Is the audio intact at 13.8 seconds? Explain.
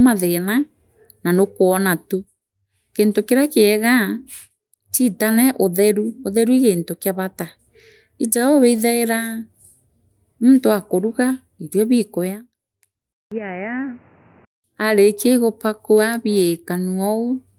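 No. An input switched to a poorer device from 13.13 to 14.64 s, likely a change to another microphone. After a short 189 ms gap the speech narrows in band, turning dull and boxy, drops a few decibels and carries new background noise about 30 dB below it.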